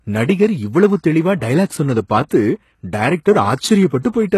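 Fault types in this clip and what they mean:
HE-AAC compression: The damage is plainly audible, likely from HE-AAC at a low rate fitting 16 kbps. Only the lower spectrum is truly coded. The treble is rebuilt from copied lower bands, so its harmonics mismatch. Nothing sounds above 12.3 kHz.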